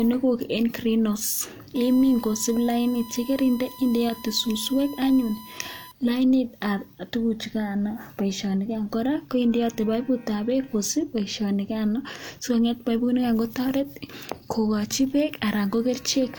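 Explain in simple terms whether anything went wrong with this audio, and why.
The recording device was picking up electrical noise from its USB connection. The USB link draws power in quick bursts a thousand times per second, and that rhythm leaked into the audio circuit. The result is USB whine: a steady, high-pitched tone at 1 kHz running under the speech from 1.75 to 5.92 seconds. It stays quieter than the voice, and its pitch never changes.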